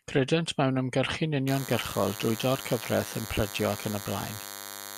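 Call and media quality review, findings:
DECT cordless phone buzz from 1.47 s, starting just after "mewn ymgyrchu'n" and running to the end of the clip. A thin, steady 100 Hz buzz with a dense harmonic series, only about 10 dB below the speech. Probable component: an analogue input stage or cable near a DECT handset or base. Mechanism: 10 ms radio bursts are rectified into a 100 Hz pulse train. Mains hum, by contrast, is smoother, fundamental-heavy and at 50 or 60 Hz. This buzz is rasping and pulse-like.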